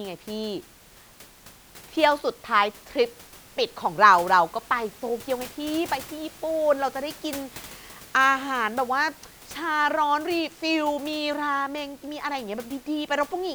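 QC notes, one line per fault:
No faults found; the room's background noise sits about 22 dB below the speech.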